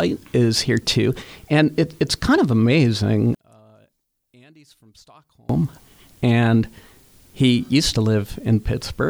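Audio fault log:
3.35–5.49 s, one channel inverted: The sound falls by about 33 dB and nearly vanishes for about 2.1 s. The likely cause is reversed polarity on one stereo channel. Summed to mono, everything shared between the channels cancels. Only their small difference remains.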